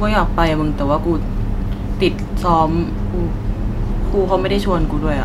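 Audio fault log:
No faults were found in this speech clip.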